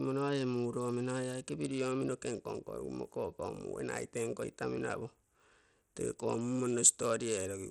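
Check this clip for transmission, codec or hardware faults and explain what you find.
One codec fault runs through the whole speech clip: the sound is consistent with Bluetooth SBC compression, which is the likely cause. Nothing is present above about 14.3 kHz, the upper treble flickers in and out, and a gritty noise and aliasing ride on the speech. SBC divides the signal into a few wide sub-bands and shares a small pool of bits among them without a hearing model. The weak top bands get starved while the rest are coarsely quantised, and the damage here is plainly audible, consistent with a low rate of around 80 kbps.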